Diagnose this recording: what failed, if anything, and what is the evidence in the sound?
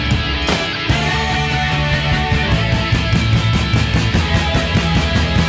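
Nothing failed in this recording, and the sound gives no evidence of any fault.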